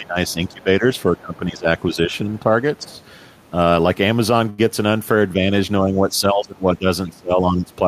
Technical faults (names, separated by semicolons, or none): speech suppressed in double talk; other side's voice leaking through; short stall from a late packet